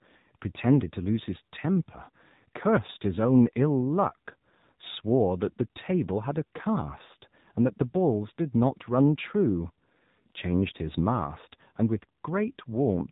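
From start to finish, the speech carries AMR narrowband mobile codec damage: nothing passes above about 3.8 kHz, and the pulse-driven vocal-tract model leaves a plainly audible buzzy, synthetic quality, which fits a low AMR-NB mode near 7.4 kbps.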